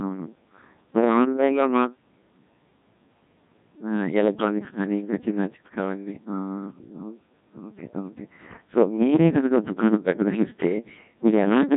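Throughout, the speech carries heavy Codec 2 vocoder damage. Only pitch, voicing, energy and envelope survive, resynthesised as sine waves, fitting a 1.6 kbit/s mode. It sounds buzzy, robotic, with nothing above 3.8 kHz.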